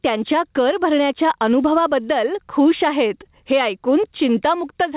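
Input gain is likely set far too high, so a fast limiter clamps down on each loud syllable, causing gain pumping throughout. The gain swings by around 10 dB, squashing the level within a call band ending at 4 kHz.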